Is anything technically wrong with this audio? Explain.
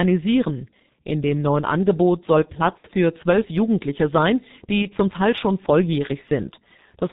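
Yes. The whole clip passes through the G.723.1 codec at a rate that fits its 6.3 kbit/s mode. It drops everything above 4 kHz and tracks the voice model slowly, so the speech is muffled and hoarse, with smeared consonants.

From 2.31 to 2.67 s there is hard clipping. Peaks about 2 dB over the stage's limit are sliced flat, adding high harmonics that crackle on the loudest moments.

At 2.78 to 2.86 s and 4.82 to 4.88 s there is VoIP packet loss concealed by the speech codec. Missing audio, about 60 ms and then 30 ms, which fits two lost frames and then one, is extrapolated from the last pitch and filter. It comes out as a fading buzz or coloured noise, and the voice stays weak briefly afterward.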